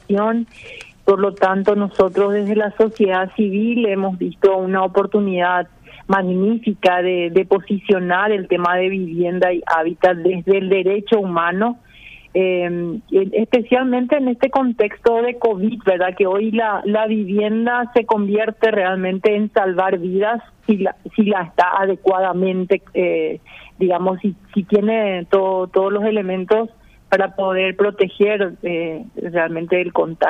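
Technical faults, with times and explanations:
No technical faults can be heard anywhere in this recording.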